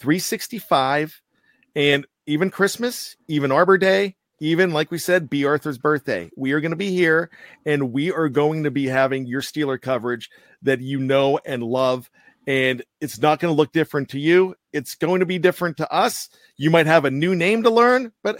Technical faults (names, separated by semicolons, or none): none